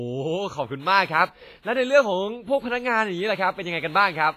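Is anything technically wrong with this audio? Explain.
Yes. Heavy codec damage runs through the whole speech clip, and it is likely WMA compression at a low bitrate, around 24 kbps. There is no content above 15.5 kHz. The transform coder spreads quantisation noise across long blocks, so each syllable carries a ringing, washy smear. At this bitrate, weak spectral lines are discarded, and a hiss swells and fades with the speech.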